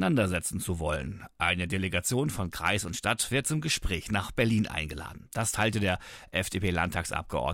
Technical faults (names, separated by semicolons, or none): none